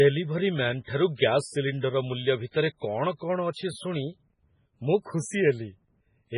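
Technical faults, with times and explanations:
Throughout, MP3 compression: the speech has a watery, swirling quality, with nothing above 10.5 kHz, so sibilants lose their top and sound dull and chirpy. This points to a heavily starved bitrate, likely around 16 kbps. With so few bits the encoder chops off the treble at a fixed frequency and zeroes the weaker frequency lines, which blink on and off from frame to frame, giving the unstable, underwater texture heard across the whole clip.
1.15 to 1.19 s, 1.81 to 1.83 s, 2.51 to 2.54 s and 3.51 to 3.56 s, pre-echo: before each of these sharp onsets a brief hiss creeps in, lasting 41, 23, 32 and 48 ms respectively, and the attacks themselves sound softened. The codec spreads its quantisation noise across a whole block, so when a sudden attack lands late in that block, noise scaled for the loud part leaks into the quiet instant ahead of it.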